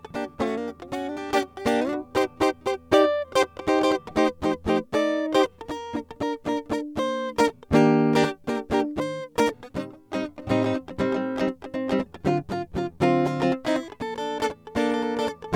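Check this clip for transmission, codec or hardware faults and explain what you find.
No faults found in this music.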